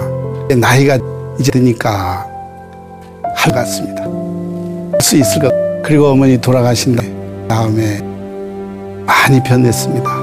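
Chunks out of order scramble the audio at 0.5 to 1.5 s, 3.5 to 5.5 s and 7.0 to 8.0 s. Half-second blocks play one or three blocks late, causing jumbled moments with hard joins.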